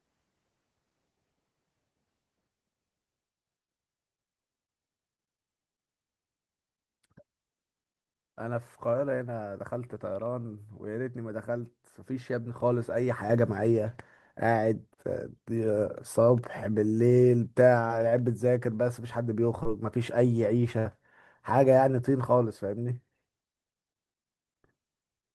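Short concealed packet loss hits twice in this speech, from 17.87 to 17.91 s and from 19.63 to 19.67 s. Each time about 20 ms of the stream failed to reach the decoder in time, and the receiver covered the hole with roughly 16 to 17 ms of synthesised continuation before blending back into real audio. Each gap is heard as a quick smear or wobble, brief enough that a small sound could slip past unnoticed.

A burst of packet loss follows from 20.79 to 20.87 s. Around 60 ms went missing in one run, which fits several consecutive packets. The receiver extended the last sound for about 62 ms while turning it down, so a held buzz or a fading hiss sits where the real audio should be, and speech resumes slightly further on with that stretch gone. The Opus call path is heard in the band limit near 12 kHz, which fits a bitrate of around 20 kbps.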